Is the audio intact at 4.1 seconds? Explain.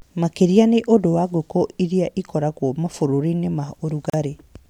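No. A gap at a join of encoded pieces cuts the speech from 4.10 to 4.14 s, about 38 ms. Two separately encoded pieces were joined untrimmed, leaving padding and start delay. The silence has smeared edges, then speech resumes where it stopped.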